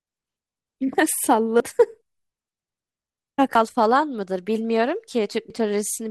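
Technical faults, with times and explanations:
1.60 s, 3.55 s and 5.50 s, audio missing between chunks: the speech jumps forward abruptly at each of these points, with a small piece of sound gone and the two sides butted together with no gap of silence. Each loss is about 50 ms. The skips repeat at an even spacing that fits processing in 2-second chunks, with a short stretch likely dropped each time one chunk is closed and the next opened.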